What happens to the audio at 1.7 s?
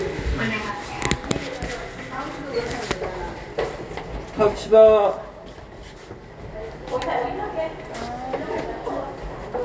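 Nothing goes wrong at 1.7 s: the sound carries on intact through that moment, with no dropout, click or distortion.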